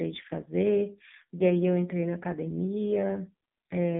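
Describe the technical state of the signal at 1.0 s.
At 1.0 s the speech carries AMR narrowband mobile codec damage, present throughout. A 5.9 kbps pulse-driven vocal-tract model leaves only 150 Hz to 3.7 kHz, sounding heavily buzzy and synthetic.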